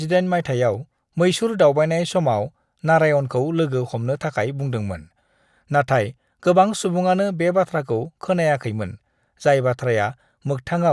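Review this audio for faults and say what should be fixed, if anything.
No faults heard here; nothing needs fixing.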